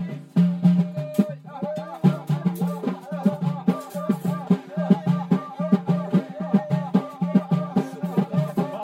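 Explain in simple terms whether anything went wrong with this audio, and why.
One channel arrives about 5 ms late and is mixed with the other, causing channel delay (comb filtering) throughout. Evenly spaced frequencies from around 100 Hz upward cancel, so the sound is hollow and phasey.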